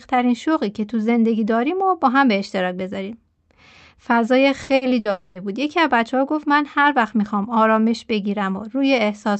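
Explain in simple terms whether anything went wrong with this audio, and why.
Around the middle of the clip, the speech briefly stutters. At 4.63, 4.75 and 4.99 s there are short moments where the sound smears into a brief, fading buzz or hiss instead of carrying on normally. Each one is a burst of packet loss. A few small chunks of the call's audio never arrived in time, so the receiving end covered each hole with about 60 ms of stretched-out copy of the last sound, then jumped ahead, skipping a similar slice of speech.

Right after that, from 5.11 to 5.38 s, the same kind of smeared, fading fill lasts much longer, about a quarter of a second, before the speech picks up again further along. It never drops to silence. This longer stretch is most likely a long network dropout, where nothing got through for a while and the receiver kept filling the gap with the last sound it had until real audio returned. 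The words that should have been there are simply gone.

All of this happened on a normal internet call connection, which also trims away the very highest frequencies above 8 kHz.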